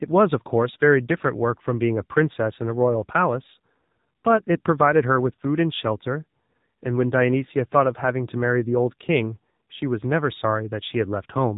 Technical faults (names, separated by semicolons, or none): AMR narrowband mobile codec